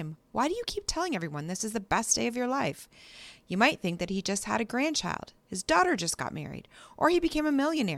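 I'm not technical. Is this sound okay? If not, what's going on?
Yes, it's fine: nothing in this recording sounds broken or glitchy, so there's nothing to worry about.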